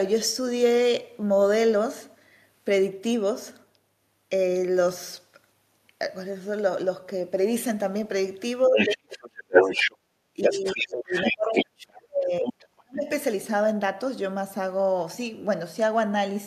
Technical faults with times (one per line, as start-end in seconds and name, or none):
8.65-9.96 other side's voice leaking through
8.67-9.69 speech suppressed in double talk
9.97-10.06 background gated by the echo canceller
10.34-13.09 speech suppressed in double talk
10.42-11.65 other side's voice leaking through
12.43-12.65 other side's voice leaking through